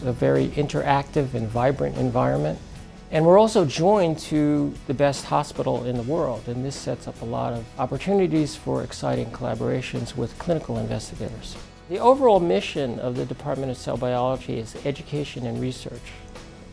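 No technical faults can be heard at any point in the clip, so there is nothing to describe in time order.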